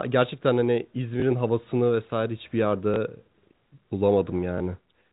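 At 1.20–1.22 s, 2.94–2.96 s and 4.58–4.60 s the speech shows packet loss with the last packet repeated: each time, 20 ms of audio goes missing, which fits a single lost 20 ms packet, and the previous segment is replayed in its place. On the waveform, a repeated 20 ms block appears with a step at its edges, and the spectrogram shows a thin vertical line. The content above 4 kHz is empty throughout, from the telephone coding.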